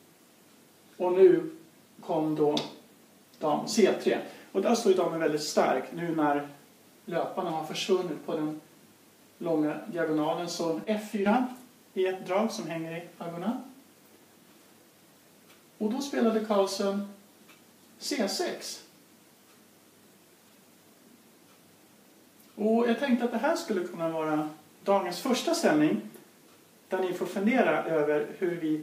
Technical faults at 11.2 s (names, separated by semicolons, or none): sudden gain jump